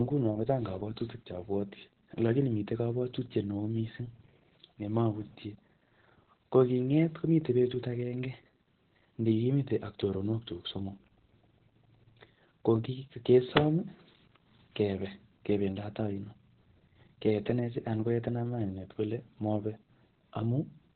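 From start to finish the speech carries heavy Opus voice compression. Nothing is present above 4.3 kHz, so the codec has fallen back to narrowband and is running its SILK linear-prediction coder alone. The excitation is quantised coarsely, which leaves the speech muffled, hoarse and slightly robotic. The band limit and the depth of the damage point to a bitrate near 8 kbps.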